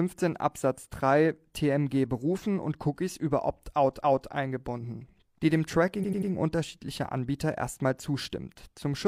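Repeated frames at 4.00 to 4.28 s: a 0.28 s stretch of compressed speech is played twice, just before "eingebunden die dem", so the decoder restates that moment as a stutter. A second case at 5.99 to 6.27 s, right after "eingebunden die dem", loops a shorter 93 ms block three extra times, which fits a run of two frames, for a rapid triple stammer. Each event adds 0.28 s to the clip.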